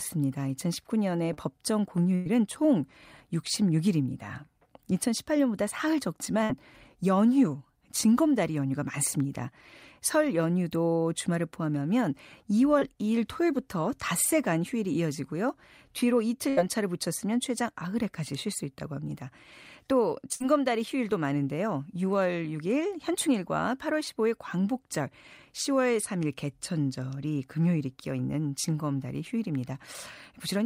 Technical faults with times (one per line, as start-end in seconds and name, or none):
1.33-1.39 short concealed packet loss
2.15-2.27 burst of packet loss
6.43-6.51 burst of packet loss
12.79-12.83 short concealed packet loss
16.49-16.59 burst of packet loss
20.33-20.42 burst of packet loss